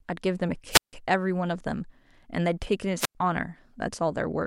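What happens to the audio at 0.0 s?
Nothing goes wrong at 0.0 s; the audio is intact, with no dropout, click or other fault at that moment.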